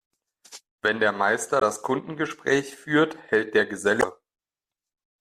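At 1.58 to 1.63 s and again at 3.99 to 4.04 s, the speech is broken by short bursts of damaged data in the compressed stream. Corrupted bytes make the decoder misread those frames and lose sync until it finds a valid header, producing a brief chirp or squawk. On a spectrogram each shows as a sharp vertical smear of broadband energy unrelated to the surrounding harmonics; the waveform shows an abrupt discontinuity.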